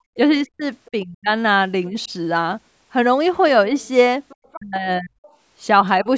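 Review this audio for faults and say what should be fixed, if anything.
At the very start, 0.00 to 0.04 s, the room sound drops by about 24 dB for roughly 40 ms before returning. This is background gated by the echo canceller, which clamped the microphone hard while the loudspeaker was active and released it a moment later.

The speech dips away sharply from 0.32 to 1.29 s and again from 4.56 to 5.21 s, falling by something like 40 dB across much of each stretch. A shallower dip of a few decibels follows at 1.9 to 2.1 s. This is likely speech suppressed in double talk: both sides were talking, and the canceller attenuated the local talker along with the echo.

A second, fainter voice sits under the speech at 0.6 to 0.91 s, 3.8 to 3.88 s, 4.29 to 4.56 s and 5.22 to 5.36 s. It is far below the main voice and loudest in the 4.29 s stretch. This is likely the other side's voice leaking through, where loudspeaker output reached the microphone and the canceller left residual echo.

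Better double-talk detection and stronger linear echo cancellation, with a headset or more distance between loudspeaker and microphone, would prevent all three.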